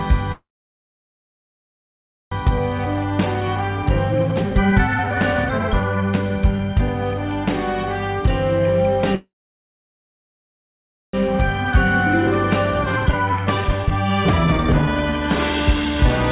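Audio reaches the listener through a call path band-limited to nothing above 4 kHz, which fits a G.711 mu-law codec at 64 kbps. Two call audio freezes, at 0.32–2.33 s and 9.15–11.15 s, each insert about 2 s of held, decaying sound that is mostly silent, likely from packets stalling until the jitter buffer ran dry. Jitter buffer speed-up follows: the buffer trims pitch periods to shed the backlog, running the audio at 142% from 2.58–7.32 s, 109% from 11.27–11.73 s and 161% from 12.76–15.90 s, at unchanged pitch.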